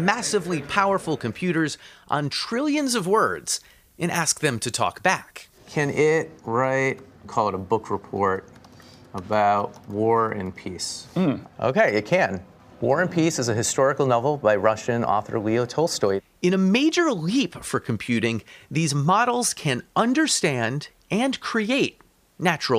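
From 2.78 to 5.58 s, pre-emphasis is left on: the treble lift applied before recording was never undone by the matching de-emphasis cut on playback, a curve shape that fits the CD 50/15 µs standard. The top end stands about 8 dB higher at 10 kHz than at 1 kHz, so for those 2.8 seconds the sound turns thin, bright and sibilant.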